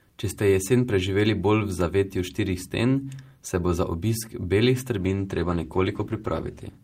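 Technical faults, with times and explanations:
5.03–6.84 s, call bitrate drop: after "bo za obisk belih" the encoder falls from 48 to 15 kbps, turning speech rough and muffled.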